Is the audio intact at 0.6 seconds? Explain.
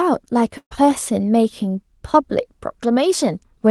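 No. A burst of packet loss runs from 0.57 to 0.73 s. About 140 ms of speech never arrived, so the receiver stretched the last sound across the gap, fading it toward silence, and the speech resumes further on with that stretch missing.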